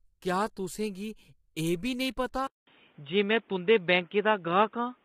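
A speech clip, rough and grainy throughout, with noise smeared between harmonics and a smeared top band, likely from low-delay AAC compression (AAC-ELD) at a low bitrate near 24 kbps. At 2.47 s a 0.2 s gap precedes a duller, slightly shifted level and faint hiss. The spectrogram shows nothing above 3.8 kHz afterwards, consistent with the input switched to a poorer device.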